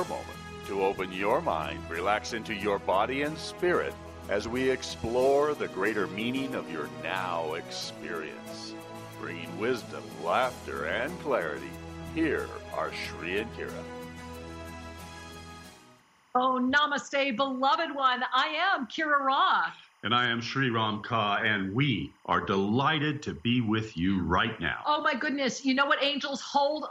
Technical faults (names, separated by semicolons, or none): timecode bleed